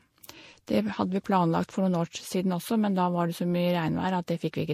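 Speech, with a double layer of compression artefacts across the whole clip, most likely from transcoding between lossy codecs: nothing sounds above about 16.5 kHz, and one codec's artefacts sit on top of another's. A single lossy pass leaves one consistent artefact character. Here two different kinds are heard together, which fits an MP3 at around 64 kbit/s later re-encoded to Vorbis at around 44 kbit/s.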